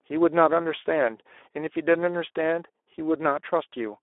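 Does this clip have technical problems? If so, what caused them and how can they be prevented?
Yes. Speex codec damage runs throughout: coarse CELP excitation makes the speech hoarse and noisy, consistent with roughly 11 kbps, unlike clean 300 Hz–3.5 kHz telephone band-limiting. Prevent it by using a higher bitrate or a modern codec such as Opus.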